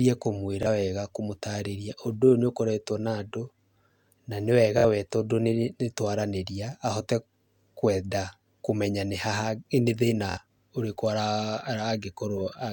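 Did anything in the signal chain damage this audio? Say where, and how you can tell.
Yes. The Bluetooth link dropped or delayed audio packets, so the receiver replayed its last buffer at 0.63 s, 4.79 s and 10.31 s. Each is a short stutter, with the first fitting one lost packet of about 23 ms and the later two about 46 ms, before speech resumes further on.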